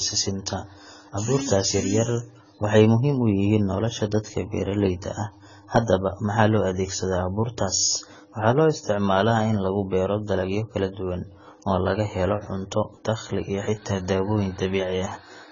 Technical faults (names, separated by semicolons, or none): AAC compression